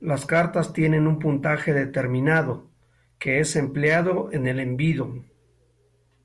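No technical faults are audible anywhere in the speech recording.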